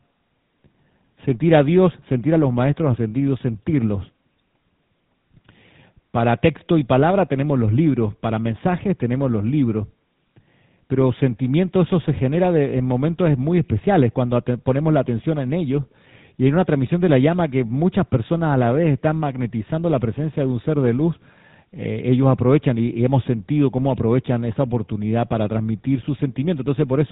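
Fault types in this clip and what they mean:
GSM full-rate codec: The speech has passed through the original GSM mobile-phone codec, which rebuilds the vocal tract as a filter and feeds it a coarse train of regularly spaced pulses instead of the real excitation. Damage is plainly audible across the whole clip: a buzzy, gravelly roughness sits on every voiced sound, and the band stops near 3.9 kHz, removing sibilance detail and air. The rate and texture fit roughly 13 kbps full-rate coding.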